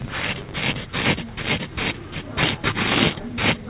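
A filter restarted on every block is audible from 0.0 to 0.8 s in this recording of sounds: a 100 Hz buzz whose strength follows the signal's level. The filter loses its state at each block boundary and restarts from silence, so every 10 ms block opens with a small transient. The audio also passed through a call path with nothing above 4 kHz, which fits G.711 mu-law at 64 kbps.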